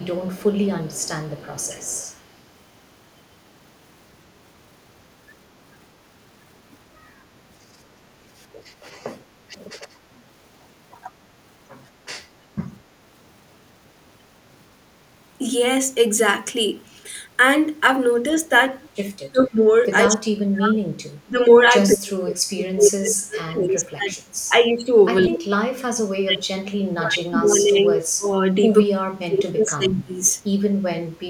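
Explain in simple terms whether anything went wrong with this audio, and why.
A faint repeat of the speech trails just behind it for the first two seconds, 0.00 to 2.11 s, arriving about a fifth of a second late. This is an echo leak: the other side's loudspeaker was likely picked up by their microphone and not fully cancelled, so it came back.

Later, the speech sinks, sometimes almost to silence, at 19.19 to 21.38 s, 21.94 to 24.15 s and 26.21 to 30.19 s, with lighter, shorter dips at 24.54 to 24.83 s and 25.27 to 25.44 s. This is speech suppressed in double talk. Both sides were probably talking at once, and the echo canceller turned down the real speech along with the echo.

Near the very end, from 30.98 to 31.16 s, the room sound behind the speech briefly dips and then returns. This is background gated by the echo canceller, which turned the microphone down while the loudspeaker played.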